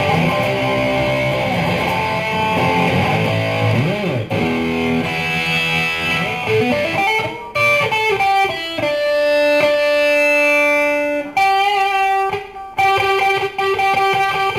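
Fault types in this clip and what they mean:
Crude rate conversion: Samples are dropped or repeated with no filter, which fits a 48 kHz to 44.1 kHz change. The sound carries a gritty, inharmonic fizz about 25 dB below it, tracking loud and high content. Unlike clipping distortion, its tones bear no harmonic relation to the source.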